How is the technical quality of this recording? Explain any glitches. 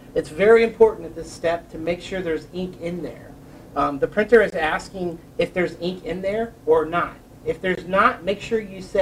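Three blocks of digital silence interrupt the recording. Each likely came from an output buffer that wasn't filled in time, so the sound cut out abruptly and back. At 1.86 s a 5.3 ms gap, fitting a 256-sample buffer, gives a tick. At 4.50 s a 19.6 ms gap gives a pop. From 7.75 to 7.77 s a 21.3 ms gap, fitting a 1024-sample buffer, leaves a brief hole.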